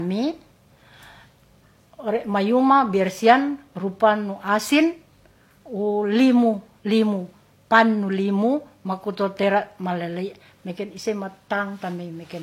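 Throughout the speech, two layers of codec artefacts overlap and nothing sounds above 16.2 kHz, likely from transcoding between lossy codecs, HE-AAC then Vorbis.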